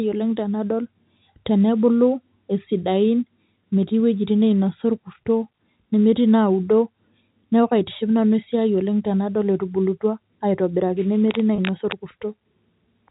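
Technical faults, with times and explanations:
8.44 s and 11.56 s, packet loss with pitch repetition: a brief held, buzzy note of about 20 ms, where the receiver repeated the last pitch period to cover each missing packet.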